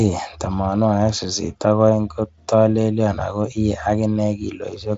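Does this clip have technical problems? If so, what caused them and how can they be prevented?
No, nothing in this speech clip stood out as a technical problem on listening, so there is nothing here that needs preventing.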